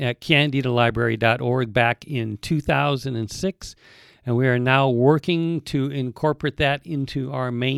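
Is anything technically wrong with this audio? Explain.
No, nothing technically wrong stood out on listening to this speech clip.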